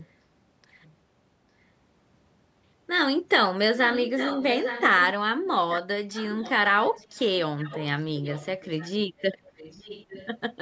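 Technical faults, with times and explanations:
3.84–5.12 s, 5.75–5.81 s, 6.12–6.52 s, 6.83–7.23 s, 7.58–7.85 s, 8.16–9.22 s and 9.44–10.28 s, echo leak: a delayed second copy of the speech trails the original by about 0.85 s, in short scraps and longer stretches, sitting roughly 10 to 25 dB below the direct speech and fading in and out. This is likely a loudspeaker-to-microphone path at one end of a call that the echo canceller only partly suppressed, so the residue was sent back.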